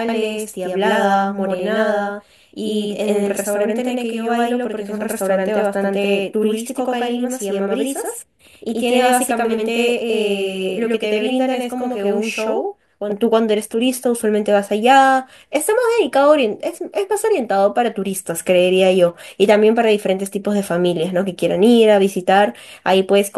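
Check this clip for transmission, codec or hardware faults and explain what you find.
There's one fault here: a channel delay heard as doubling, running from the start to about 13.1 s. One side of the stereo pair is arriving roughly 85 ms behind the other, which fits a 4096-sample buffer getting stuck in that channel's path. Once the two get folded to mono, the late copy doesn't blend in. It sits there at full level as a distinct slap echo trailing every syllable, so the speech sounds doubled until it clears.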